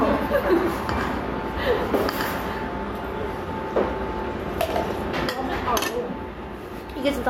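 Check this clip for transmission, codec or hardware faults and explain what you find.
Two faults are present: gain pumping across the whole clip, and a doubled audio track over the opening section.

Gain pumping runs from start to finish. The level is pulled down on loud sounds, a swing of around 5 dB. The likely cause is input gain set far too high, with a fast limiter or compressor clamping down on each peak and releasing in the quiet spaces. Loud and soft moments end up pressed close together, giving a squashed, breathing character.

A doubled audio track is already under way when the clip begins and runs to 2.56 s. A second full-band copy of the same sound trails the original by roughly a tenth of a second, about 10 dB quieter. It has no reverberant tail or room colouring, which points to a second capture path or an edit holding two out-of-step copies rather than an acoustic echo. This is likely the cause. 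At 2.56 s the copy stops abruptly instead of fading away.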